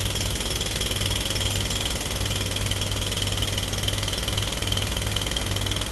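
Listening through these sounds, carried over a call connection, nothing stood out as a technical problem.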